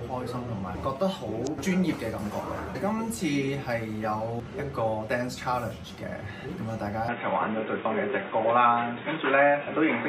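At 7.08 s the audio abruptly turns dull and boxy, with nothing above 3.8 kHz, a level shift of around 5 dB, faint new background noise and no gap. This most likely comes from the input switching to a poorer device until the end.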